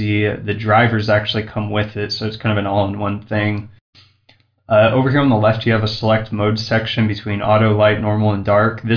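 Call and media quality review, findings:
No audible faults found.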